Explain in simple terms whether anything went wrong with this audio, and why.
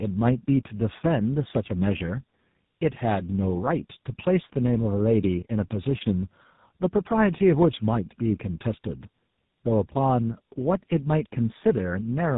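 Tandem speech coding: the call passed through two phone coders in a row, the second reworking the first's damage, so it sounds rough, muffled and warbly throughout.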